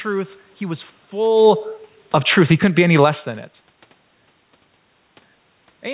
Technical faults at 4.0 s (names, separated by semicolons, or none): none